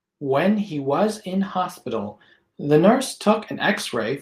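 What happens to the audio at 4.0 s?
Nothing goes wrong at 4.0 s; the audio plays through that moment intact, with no dropout, click or distortion.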